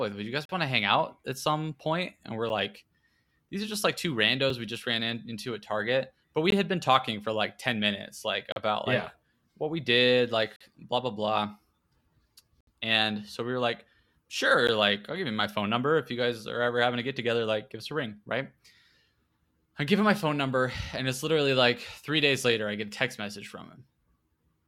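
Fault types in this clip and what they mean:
Gap between stream segments: adjacent segments of the stream carry time stamps that fail to meet, and the player plays silence across each shortfall. This speech is cut by hard-edged holes at roughly 2-second spacing, at 0.45, 2.49, 4.5, 6.5, 8.52, 10.56, 12.61 and 14.67 s, lasting from about 4 ms to 67 ms. No audio goes missing. On a waveform each gap is a flat line with abrupt sides; a spectrogram shows a thin vertical blank column at each one.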